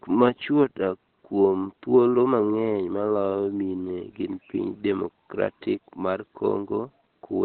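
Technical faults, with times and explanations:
Throughout: Opus compression, likely; the sound is muffled and hoarse with nothing above 4.3 kHz, heavy damage consistent with its narrowband speech mode at roughly 12 kbps.
0.21–0.63 s: hard clipping; peaks overdriven by about 3 dB are sliced flat, adding high harmonics heard as a brief crackle on peaks.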